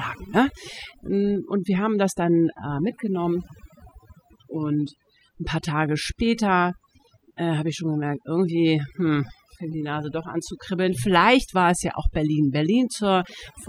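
Overdone noise removal runs through the whole speech clip, from start to finish. A noise reduction stage was pushed too hard. It cuts individual frequency bands deeply whenever they sit close to its noise estimate. Quieter parts of the voice fall below that threshold and vanish with the noise. Between phrases, the background drops to near silence, scattered with small twinkling specks.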